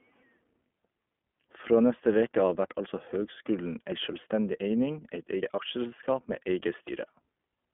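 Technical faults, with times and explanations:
Throughout: iLBC codec. The speech is confined to a telephone band of roughly 200 Hz to 3.4 kHz and has a plainly audible rough, synthetic edge. Each 20 ms frame's excitation is coded independently, a texture that points to iLBC's 15.2 kbps mode rather than a wideband codec.
2.86 s, 5.42 s and 6.88 s: dropped buffer (overrun). Each is a jump with the sound skipping forward, the first just after "neste veke av vert". About 70 ms is missing and the edges are butted together with no silence, likely because the hardware overwrote samples before the program read them.
5.56 to 5.60 s: lost iLBC frames. One 20 ms frame is missing, and the decoder fills it by repeating the last pitch cycle mixed with noise, giving a brief held, buzzy vowel instead of a click. Normal sound returns almost at once, since each frame decodes on its own.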